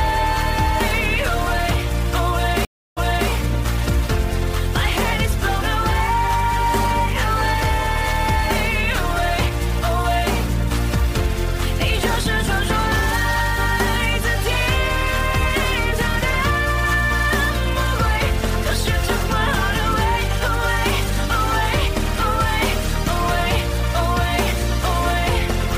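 At 2.65 to 3.29 s, a stream reconnect occurs. The audio drops out for about 0.32 s, then resumes 0.33 s earlier, repeating a short stretch.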